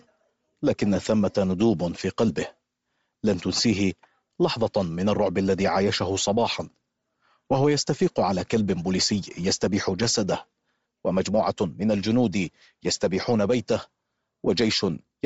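From start to finish the speech has a breathy, grainy edge, its upper band hissy and smeared rather than crisp. This plainly audible damage is likely Bluetooth LC3 compression stripping high-frequency detail and filling it with noise, which fits about 32 kbps in 7.5 ms frames.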